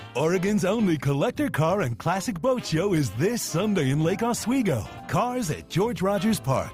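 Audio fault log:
No faults detected in this audio.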